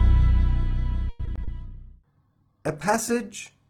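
From 1.09 to 1.52 s there's repeated packet loss, four quick gaps patched by stretching the last sound, so it turns choppy and robotic, the longest hole about 100 ms. Then from 1.58 s to the end a call bitrate drop sets in: the sound goes rough, watery and dull, which fits the encoder falling from 48 to 12 kbps.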